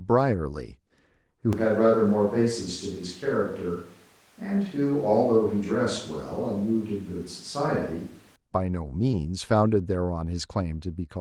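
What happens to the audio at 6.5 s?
At 6.5 s the speech is in the middle of a switch to a distant microphone, running from 1.53 to 8.36 s and likely caused by the close microphone dropping out. The speech turns roomy and hollow, with thinner bass and roughly 5 dB less level. The waveform shrinks at the sudden change, and the spectrogram shows weaker low frequencies, blurred reverberant tails and a higher noise floor, only about 30 dB below the speech.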